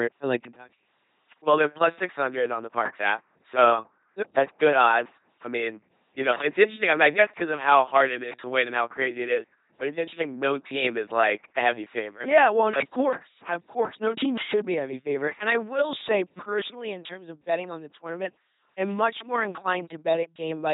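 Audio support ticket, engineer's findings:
LPC-10 vocoder, throughout the speech. Heavy buzzy, mechanical robot voicing, with hiss bursts where voiced/unvoiced switching misfires. Spectrogram: rigid pulse-train harmonics alternating with flat noise frames, smeared formants, nothing above 3.8 kHz. Consistent with 2.4 kbit/s LPC-10 coding.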